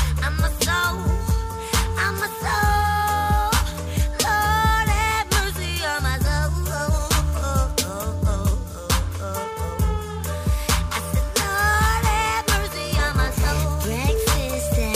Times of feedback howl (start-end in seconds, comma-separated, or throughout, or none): none